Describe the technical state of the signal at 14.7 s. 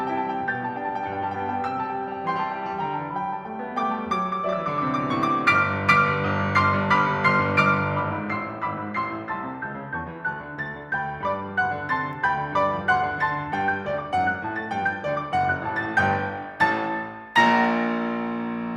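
At 14.7 s the music plays through intact, with no dropout, click, distortion or other fault to be heard.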